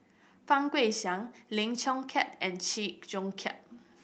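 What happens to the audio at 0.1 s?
Nothing goes wrong at 0.1 s; the speech plays through intact at that moment.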